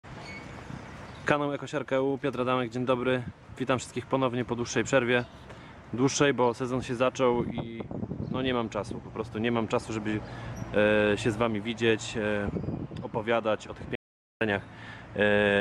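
The audio has an audio dropout to silence from 13.95 to 14.41 s, about 0.46 s of silence. Unlike a natural pause or a gated fade, the room tone vanishes abruptly, which points to likely momentary loss of the input signal.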